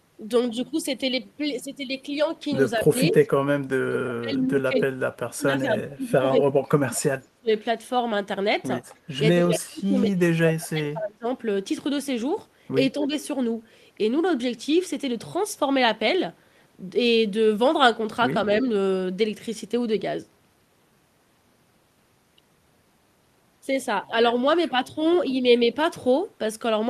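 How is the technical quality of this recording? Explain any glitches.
The recording has two recurring faults from call echo handling, concentrated between about 3 and 13 s.

Speech suppressed in double talk, at 2.77–3.16 s, 3.52–7.5 s, 9.52–11.27 s and 12.94–13.13 s, is likely from an echo canceller that, with both sides talking, confused the talker with echo and ducked it. The voice drops by up to about 35 dB and is turned down for roughly three seconds within the 3.52–7.5 s stretch.

Echo leak, at 2.97–3.15 s, 4.75–4.8 s, 5.59–5.94 s and 7.23–7.28 s, likely comes from a loudspeaker-side echo canceller leaving part of its microphone pickup uncancelled and sending it back. A copy of the voice arrives about 230 ms late. It is strongest at 4.75 s, about 5 dB below the speech, and about 40 dB below by 7.23 s.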